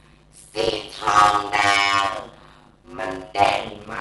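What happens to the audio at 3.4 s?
At 3.4 s, as throughout the clip, a block size mismatch (padded) pads each 256-sample block with zeros to fill a larger read, so the speech buzzes at 100 Hz and runs at about 0.53 times normal speed. The band also stops at 11.4 kHz with a dull, rough fluttering around tones, likely from low-bitrate Dolby Digital compression, which fits about 64 kbps.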